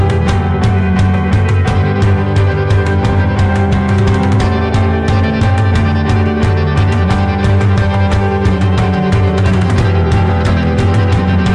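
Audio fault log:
No technical faults can be heard anywhere in this audio.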